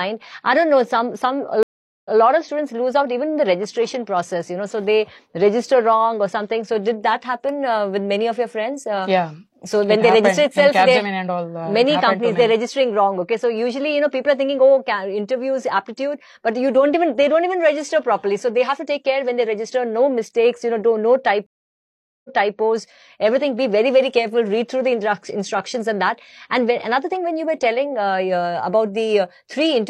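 At 1.63 s the audio drops out for about 0.42 s, then resumes 0.14 s earlier, repeating a moment. At 21.46 s a 0.78 s silence ends with a 0.33 s replay. Both are stream reconnects: the connection broke, a fresh decoder started, and the server resent already-played audio.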